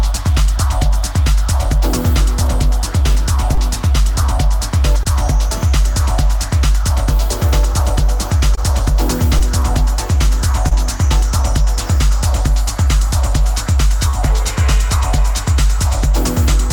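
Six spots of short concealed packet loss turn up, at 3.55–3.59, 5.03–5.07, 8.55–8.59, 9.39–9.42, 10.68–10.73 and 14.11–14.15 s. Each time about 20 ms of audio didn't arrive in time, which fits a single 20 ms packet going missing. The receiver papered over it by stretching the preceding sound and then cross-fading back in. You hear a quick smear or wobble, each lasting a few hundredths of a second.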